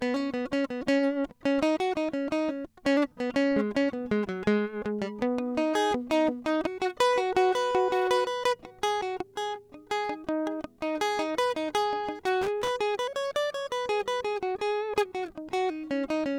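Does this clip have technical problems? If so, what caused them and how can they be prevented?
Yes. From 12.42 to 12.71 s, loose connector crackle interrupts the music. A worn or dirty contact somewhere in the cable path was making and breaking rapidly as it shifted, so the signal was chopped on and off many times within about 0.3 s. The result is a short, irregular burst of scratchy crackle over the music. Keeping connectors clean, replacing worn plugs and strain-relieving cables so they cannot move during recording would prevent it.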